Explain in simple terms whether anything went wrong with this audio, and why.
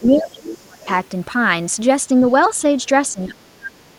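The echo canceller likely got confused while both people talked at once, so it turned the talker down too: speech suppressed in double talk makes the voice sink or drop out from 0.0 to 0.88 s and from 3.12 to 3.96 s. The same canceller also likely failed to fully remove the loudspeaker sound, so the other side's voice leaks through as faint scraps at 0.04–0.22 s, 0.49–0.57 s and 2.28–2.32 s.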